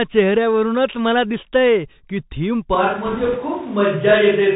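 The whole clip passes through a Bluetooth CVSD headset codec, a one-bit delta modulator whose step size adapts as it goes. The sound fits a 64 kbit/s CVSD stream. It cuts everything above 4 kHz, so the speech is narrowband throughout. Where loud high-frequency energy rises faster than the step can follow, the tracking falls behind and distorts, s sounds come out scratchy, and a grainy hiss sits under the speech. The codec damage is plainly audible.

At 2.75 s the recording switches to a distant microphone, most likely because the close microphone dropped out and a microphone further away took over. From that point to the end, the speech turns roomy and hollow in a single step and loses low end. The level stays about the same, so the change shows in tone rather than loudness. Background noise rises to roughly 25 dB below the speech.

From 3.06 to 3.37 s there are bit errors on a Bluetooth voice link, with roughly 2 percent of bits flipped. 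In CVSD each bit only nudges the signal by one small step, and the decoder's adaptation lets any mistake fade away. A single wrong bit therefore can't produce a loud click. Instead, a rushing, crackly noise runs through that third of a second, laid over the already distant, roomy speech.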